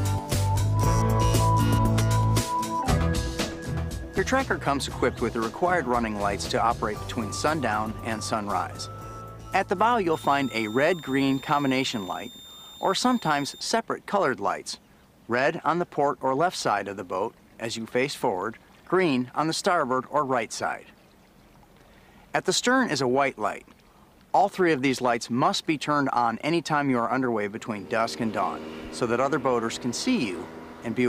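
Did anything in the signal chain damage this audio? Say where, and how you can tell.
Yes. From 10.13 to 13.61 s a thin, steady whistle sits near 3.6 kHz, drifting slightly between 3.62 and 3.65 kHz, about 20 dB below the signal. This is switching supply whistle at the analogue power stage: a switching power supply cycling at an audible rate leaks its tone into the audio.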